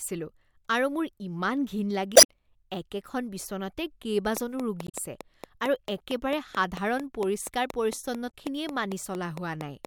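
Damaged data in the compressed stream makes the decoder lose sync, producing brief glitches at 2.13–2.26 s, 4.84–4.95 s and 8.28–8.34 s. From 4.37 s to 9.86 s, likely interference or a struggling interface injects a train of clicks: about thirty evenly spaced ticks at 4.4 per second, peaking roughly 10 dB above the speech.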